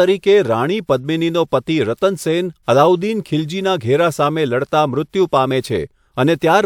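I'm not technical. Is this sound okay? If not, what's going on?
Yes, nothing in this speech recording points to a technical problem with the signal.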